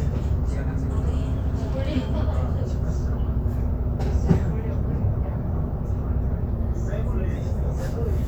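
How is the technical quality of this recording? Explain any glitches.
The recording has two abrupt pitch-and-speed glitches. Drift correction step, 0.5 to 2.64 s and 6.5 to 7.36 s: a clock-matching resampler likely shifted the playback rate in one jump, first 6.4% faster, then 6.4% slower. The sound lurches up 108 cents, later drops 115 cents, each time snapping back.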